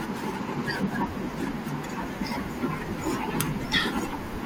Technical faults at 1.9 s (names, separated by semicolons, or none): frames out of order